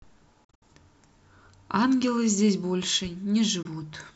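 Speech that cuts out in silent holes at 0.44–0.62 s and 3.62–3.66 s, resuming as if it had played on: a likely Bluetooth dropout from late, discarded packets.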